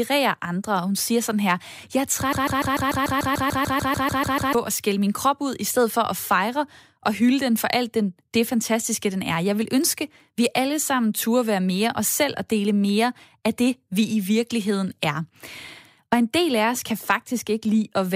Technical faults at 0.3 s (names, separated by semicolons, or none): none